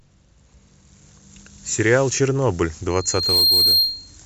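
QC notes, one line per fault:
2.9–4.18 s, loudspeaker feedback squeal. A single tone near 4.2 kHz swells over about half a second and ends up roughly 10 dB above the speech. The microphone is picking up its own loudspeaker. At that frequency the loop gain exceeds one, so the tone keeps feeding itself.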